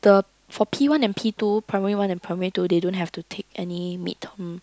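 No technical faults can be heard anywhere in the recording; the speech signal stays steady and intact throughout.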